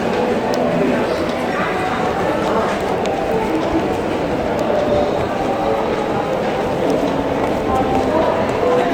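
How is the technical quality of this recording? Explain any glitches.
The recording has one fault, a layered coding degradation present throughout.

Transcoding between lossy codecs, across the whole clip: the sound was likely encoded with one lossy codec and then re-encoded with another. The second encoder wastes bits reproducing the first one's smearing and swirl, then adds its own, so two distinct artefact textures stack. The character fits a Vorbis stage near 64 kbit/s followed by Opus near 48 kbit/s. Content above roughly 20.1 kHz is absent.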